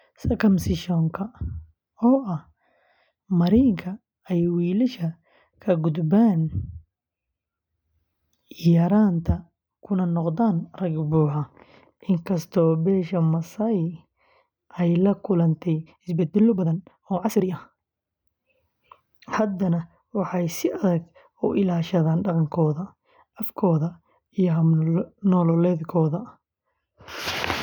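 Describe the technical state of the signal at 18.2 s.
At 18.2 s you're right at the tail of a time-stretched section running from about 15.81 to 18.21 s, just after "ay la kulantay". The speech is sped up about 1.44 times with the pitch unchanged, likely from software dropping short slices to squeeze it, so it sounds rushed until the pace snaps back.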